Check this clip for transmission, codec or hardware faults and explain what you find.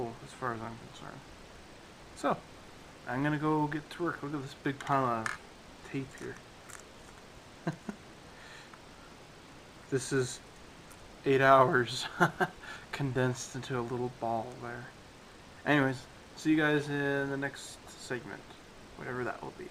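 One fault is present, near the end of the clip: frames out of order, between 18.38 and 18.41 s. Over roughly 30 ms, two adjacent stretches of audio play in exchanged order, which fits a pair of single 10 ms blocks arriving swapped and being decoded as received. The result is a brief garbled flutter. No time is lost, so the timing after the glitch stays intact.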